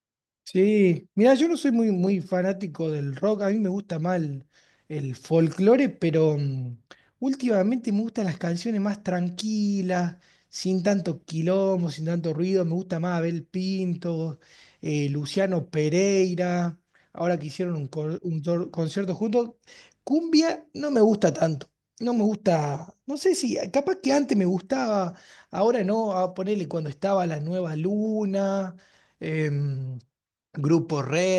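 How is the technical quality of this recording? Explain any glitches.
No technical glitches are audible.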